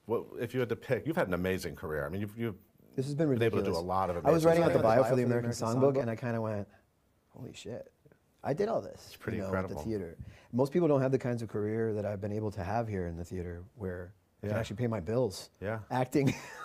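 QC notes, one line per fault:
4.47–6.01 s: doubled audio track. A full-band second copy of the sound trails the original by roughly 150 ms at around 5 dB lower, likely from an edit holding two copies out of step. On a spectrogram every onset repeats as a sharp-edged shadow with no decay tail, switching on and off abruptly.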